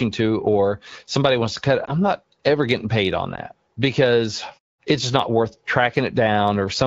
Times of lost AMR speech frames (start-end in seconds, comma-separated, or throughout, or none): 1.86-1.93, 3.35-3.40